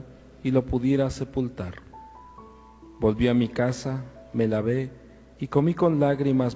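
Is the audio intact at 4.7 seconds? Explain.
Yes, the audio at 4.7 seconds is intact, with no dropout, glitch or other fault; it passes through the call path as expected, with its content stopping around 8 kHz as a wideband call codec would leave it.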